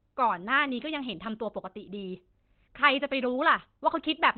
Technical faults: Opus compression

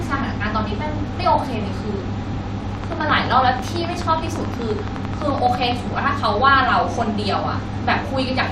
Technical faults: DAB burbling; train of clicks

